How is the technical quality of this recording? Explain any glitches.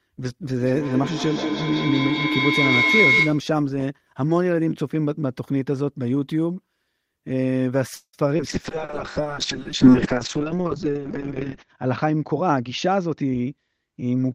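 The recording has several clear call-transport faults, concentrated at the start and in the second half.

From 0.58 to 3.51 s a piercing tone near 2 kHz swells to about 3 dB above the speech, with the loop repeating roughly every fifth of a second. This is feedback howl: the sound loops between a loudspeaker and a microphone in the same room, gaining level on each pass until it rings.

Between 7.95 and 8.16 s the sound stretches into a fading buzz or hiss for about 177 ms, including some 70 ms of silence, then resumes exactly where it stopped. This is a call audio freeze, likely from delayed packets draining the jitter buffer. Nothing is lost, but a gap is inserted.

From 8.37 to 8.42 s the speech jumps forward. This is a skip ahead: about 70 ms of audio was discarded while later audio was already waiting, and the two sides were joined with only a 17 ms fill.

From 8.49 s to the end the speech turns muffled and coarse. 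This is a call bitrate drop from 32 to 6 kbps. The encoder cut the bandwidth from 20 kHz to 8 kHz and held its lowest rate for about 3.1 s.

From 9.21 to 10.40 s the speech drags at 95% speed with unchanged pitch. This is a jitter buffer slow-down: the receiver repeated short pitch periods, adding 72 ms to rebuild its reserve, which leaves sounds slightly drawn out.

From 12.31 to 13.94 s the speech hurries at 111% speed, still at the same pitch. This is a jitter buffer speed-up: the receiver trimmed around 200 ms in small pieces to shed excess buffered delay.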